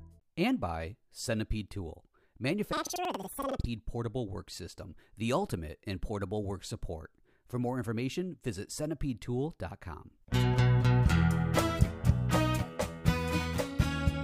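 From 2.73 to 3.73 s the audio jumps an octave higher with a flutter at about 10.8 Hz, the sign of planar audio read as interleaved. Each 93 ms block (fitting 4096 samples) plays twice at double speed, left then right. Unlike simple double-speed playback, the overall pace stays correct.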